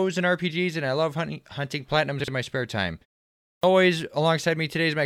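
At 2.2 s, running to 2.28 s, the speech has chunks out of order: a block of about 40 ms arrives one chunk late and plays after the block that should have followed it. No audio is missing, but the sequence is swapped, leaving three abrupt joins within 80 ms. The result is a brief jumbled moment in the speech.

At 3.47 s there is a clipped start after a pause. The preceding half-second of silence lets the output device drop into an idle state, and it needs time to wake and resynchronise before it passes audio again. About 164 ms of the returning speech is swallowed, through to 3.63 s, so the first sounds are missing and the speech begins abruptly out of silence.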